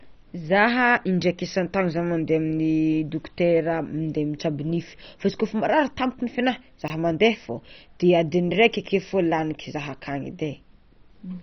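A speech recording, dull throughout with a gurgling, granular roughness. Nothing survives above about 6.1 kHz, and the damage is heavy, which points to MP2 compression as the likely cause at a low rate, something near 32 kbps. A Layer II encoder short of bits switches off whole upper sub-bands and quantises the remaining ones coarsely. On a spectrogram this shows as a hard ceiling at 6.1 kHz, with blocky, flickering patches below it where bands drop in and out. Between 6.82 and 6.9 s there is a brief jumbled moment, caused by chunks out of order. A 20 ms chunk plays three chunks late, after material that should have followed it. No audio is lost, but the order breaks at hard joins. In the waveform these appear as abrupt discontinuities at chunk boundaries, and on the spectrogram as thin vertical lines with misaligned harmonics across that span.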